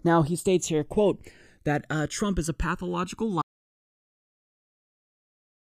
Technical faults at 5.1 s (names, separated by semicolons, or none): channels drifting apart; audio dropout to silence